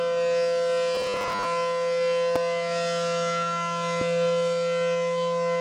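Robotic sound from repeated short buffers runs from 0.95 to 1.45 s as a rigid, metallic buzz at 100 Hz that roughly follows the sound. The likely cause is audio arriving too seldom, so the playback repeated the last 10 ms or so over and over, skipping about half of the real material.

Loud pops land at 2.36 to 2.38 s and 4.01 to 4.04 s, each a single sharp hit, peaking about 15 dB and then about 10 dB above the surrounding level while the sound continues underneath. Likely a sudden voltage step, from static, a switch or a driver glitch, got into the signal.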